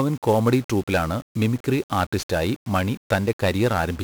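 From the first moment to the end, the speech carries the heavy damage of 1-bit DFPWM compression. Each sample is reduced to a single bit that only nudges an adaptive level up or down, so the waveform is approximated by a staircase of adaptively sized steps. That coarse tracking leaves dense broadband quantisation noise riding on everything: the voice sounds fuzzy and crackly, and the upper frequencies drown in hiss. The coarseness fits a rate of about 48 kbps.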